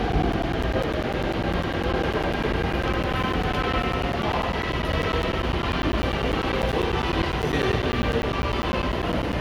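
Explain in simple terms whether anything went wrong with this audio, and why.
Periodic USB or driver dropouts run from 0.12 s to 9.33 s. Every 0.1 s, about ten times a second, a sliver of sound roughly ten milliseconds long goes missing and is replaced by silence, which adds up to around a hundred tiny gaps. Something in the computer is likely pausing the USB connection or audio driver on a fixed schedule, so the sound keeps breaking with a steady, clock-like ticking wherever there is signal.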